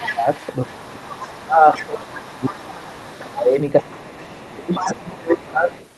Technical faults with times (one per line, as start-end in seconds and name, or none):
0.00-0.28 speech suppressed in double talk
0.00-1.41 other side's voice leaking through
0.66-2.83 speech suppressed in double talk
1.76-3.33 other side's voice leaking through
3.20-5.74 speech suppressed in double talk
3.67-5.87 other side's voice leaking through